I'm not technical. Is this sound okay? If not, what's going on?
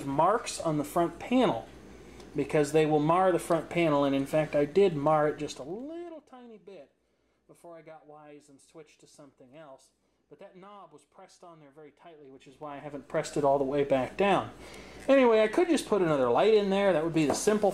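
No. At 5.36 to 6.25 s and 12.14 to 13.40 s, the volume moves in coarse steps instead of gliding, causing zipper noise: a rapid ticking as the sound fades down, then back up.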